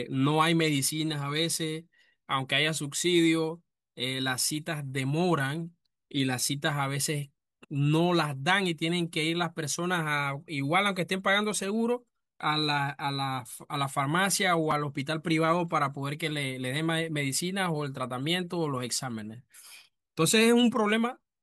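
A speech recording with a brief jumbled moment at 14.71 s, where the sound stutters for an instant. This is chunks out of order: a 5.8 ms piece of audio was written one chunk late, so it plays after the piece that should follow it. Nothing is missing, but the swapped order creates three hard joins in quick succession.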